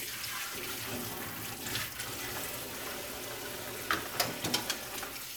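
Nothing stood out on listening to this everyday sound recording.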